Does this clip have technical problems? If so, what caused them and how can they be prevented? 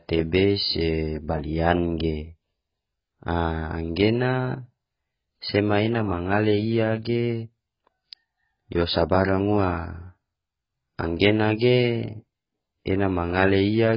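Yes. AAC compression runs throughout the speech, with nothing above about 5.2 kHz, leaving it dull, smeared and warbly on sibilants. This is likely heavy AAC-LC coding at a bitrate near 12 kbps, where the encoder discards high bands and coarsely quantises the rest. Encoding at 64 kbps or more prevents it.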